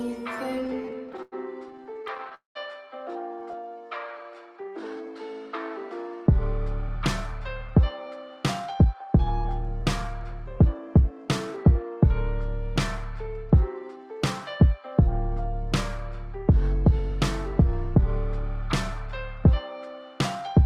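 From 0.55 to 3.55 s you get repeated stalls, a real stutter: about 28 short gaps, the longest around 95 ms, together adding roughly 0.37 s. Packets were showing up late, the jitter buffer kept running dry, and the receiver stretched the last sound each time to fill in.

Inside that stretch, from 2.35 to 2.57 s, there's a call audio freeze. The sound hangs on, fades out and then sits silent for about 140 ms before carrying on from where it stopped, adding roughly 0.21 s. The likely cause is a batch of packets held up in transit, emptying the buffer completely.

Right after, from 3.34 to 5.07 s, comes a jitter buffer slow-down. The receiver rebuilt its reserve by repeating tiny slices of the waveform, adding about 190 ms, so the audio drags at 89% speed with the pitch unchanged and sounds a bit drawn out.

Then there are two jitter buffer speed-ups. From 6.89 to 14.19 s the buffer was carrying extra delay and trimmed roughly 0.3 s of short pitch-period chunks, so the audio runs at 104%. 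From 16.91 to 18.00 s it happens again at 103%, dropping only a few tens of milliseconds.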